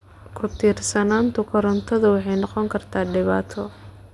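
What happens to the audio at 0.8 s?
Nothing goes wrong at 0.8 s; the speech runs through that moment intact, with no dropout, click, distortion or other fault to be heard.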